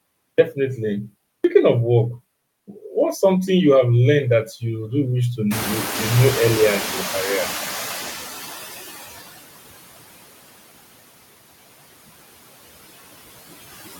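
Throughout the speech, noise suppressor artifacts are present. The background noise sinks between phrases and rises again beneath them. The suppressor works frame by frame, cutting by about 19 dB every band it judges to be steady noise. Because those decisions shift from moment to moment, the residue swells and flickers with the speech.

At 0.34 s, 1.4 s and 2.63 s, each after a short silence of 0.34, 0.32 and 0.45 s, the speech starts abruptly. It lacks its opening sound, and about 43 ms are missing each time. This is a clipped start after a pause. The output device drops into a low-power state during silence and needs a moment to wake and lock again, so the first slice of audio after each gap is swallowed.

Around 5.5 s the room noise jumps by about 24 dB, to roughly 12 dB below the speech. Instead of vanishing, it pushes through and then gradually recedes until about 9.22 s. This is the noise suppressor catching up. 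Its running estimate of the noise floor lagged behind the sudden rise, so it let the noise through at first. Over about 3.7 s it adapted and settled to a cut of about 17 dB.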